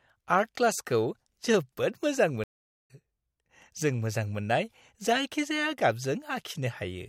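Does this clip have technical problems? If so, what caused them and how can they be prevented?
Yes. A stream reconnect after "जोबोद मोजां" drops the speech to silence from 2.44 to 2.91 s. The player rebuilt its decoder and resumed about a fifth of a second further on. A larger playback buffer and resuming at the exact broken byte position prevent this.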